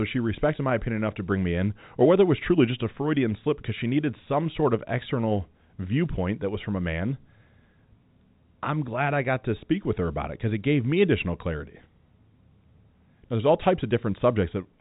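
Nothing stood out on listening to this speech clip, which carries the narrow, telephone-band sound of G.711 coding with nothing heard above about 3.8 kHz.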